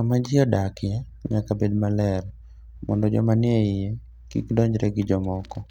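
No technical faults can be heard anywhere in the speech recording; the signal stays steady and intact throughout.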